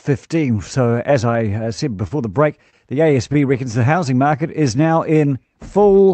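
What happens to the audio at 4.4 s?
The speech drags, running slower at unchanged pitch from 3.82 to 4.83 s: a jitter buffer slow-down, repeating pitch periods to add 77 ms, playing at 93% speed.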